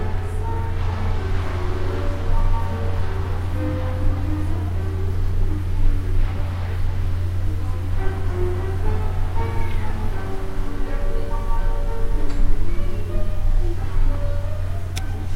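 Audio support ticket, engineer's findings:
Sample clock jitter throughout. Faint hiss tracking loud, bright passages, gone in quiet gaps. Unsteady converter clock, a few microseconds wobble, error sits roughly 50 dB under signal.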